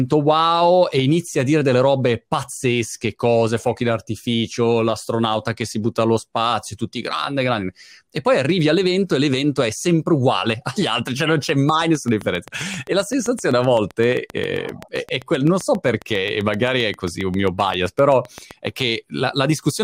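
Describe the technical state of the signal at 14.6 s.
A steady ticking runs over the speech here, part of a train of clicks from 11.69 to 18.52 s, starting just after "altri cioè non c'è": about fifty evenly spaced pulses at 7.6 per second, peaking about 5 dB above the signal, likely interference from nearby equipment.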